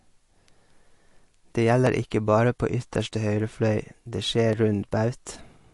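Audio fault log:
Throughout: MP3 compression. Nothing is heard above about 11.3 kHz and the codec damage is plainly audible, likely from MP3 at a low bitrate around 48 kbps. Short of bits, the encoder cuts the treble and drops weak frequency lines that flicker between frames, giving a watery, swirly texture and smeared consonant attacks.
1.87 s and 4.53 s: dropped samples. Just before "ikke bare på ytterste" and just after "ytterste høyre fløy det", the waveform jumps ahead, likely because a fraction of a millisecond of samples went missing. Far too brief to remove any sound, each is heard as a single sharp click.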